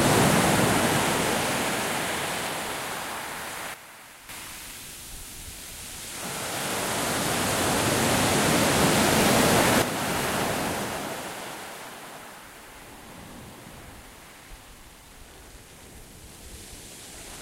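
At 3.74 s the level drops by about 9 dB in one step and returns at 4.29 s. At 9.82 s it drops again and stays down. These sudden gain jumps are likely an unramped digital gain change. Unlike a fade or compression, the background noise falls instantly with everything else.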